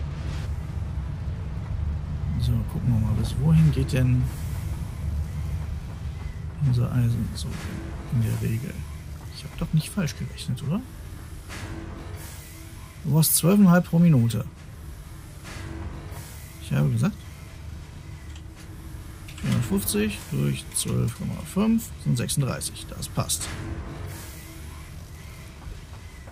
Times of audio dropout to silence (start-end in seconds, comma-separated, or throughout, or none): none